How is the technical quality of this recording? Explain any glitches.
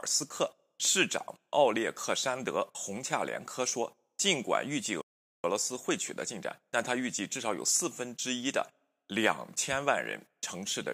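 A playback stall from 5.01 to 5.44 s is the one glitch. The speech drops to silence mid-flow for about 0.42 s, then resumes. The likely cause is the player running out of buffered data, or its thread being blocked, so output halted until it caught up.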